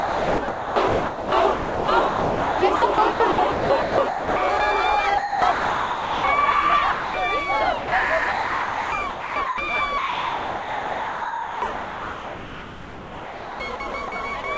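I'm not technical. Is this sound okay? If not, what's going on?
No. From 0 to 4.6 s, 5.18 to 6.24 s, 8.32 to 9.58 s and 9.98 to 14.12 s, the sound keeps breaking into steady hiss. This is sound chopped by the voice detector: the call system likely mistook parts of it for background and sent filler noise instead.

At 6.92 to 7.14 s, 7.78 to 7.92 s and 14.42 to 14.44 s, short pieces vanish into hiss. This is sound dropped by the voice detector, likely the same mistake.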